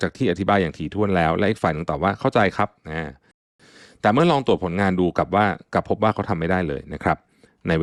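At 3.31 s the speech drops to silence for about 0.28 s, resuming at 3.60 s exactly where it left off. This is a rebuffering stall: playback exhausted its downloaded audio and waited for more data, adding roughly 282 ms without losing any content.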